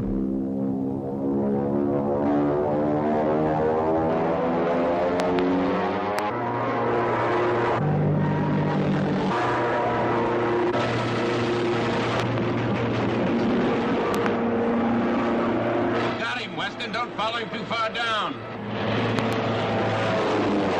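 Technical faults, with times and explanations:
5.20–5.41 s, 6.19–6.21 s, 12.20–12.40 s, 14.15–14.28 s and 19.19–19.35 s: loud pops. Each one is a sharp pop jumping about 20 dB over the sound, though the one at 12.2 s is a bit softer at about 15 dB. All but the single hit at 6.19 s come as a quick double. The sound carries straight on underneath, so it's a voltage spike added on top, likely from a switch, static or a driver glitch, with the downstream circuitry rounding it into that thump.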